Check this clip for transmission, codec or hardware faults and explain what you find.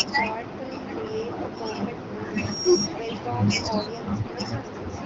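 Two faults stand out in this speech clip, a feedback squeal and a short burst of AMR bit errors. Both sit on top of the light band-limited colouring of the AMR wideband (HD Voice) codec, which fits its 12.65 kbit/s mode.

From 2.33 to 2.90 s there is loudspeaker feedback squeal. A microphone is re-capturing its own loudspeaker, and at 5.6 kHz the loop gain exceeds one. A pure tone swells over under half a second to about 10 dB above the speech. Unlike an interfering whistle, it grows by itself rather than appearing at full strength.

From 4.22 to 4.34 s there are AMR bit errors. Around a tenth of the weakly protected bits arrive flipped, over a span that fits roughly six 20 ms frames. The pulses and fine parameters land wrong, so the speech turns hoarse and gargly while keeping its pitch and level. Packet loss would instead leave gaps or muting.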